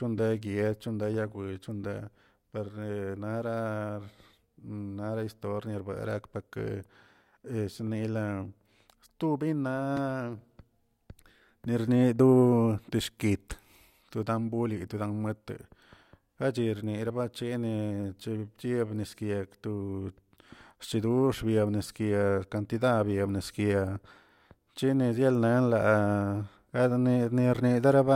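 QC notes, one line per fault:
No faults heard anywhere in this speech.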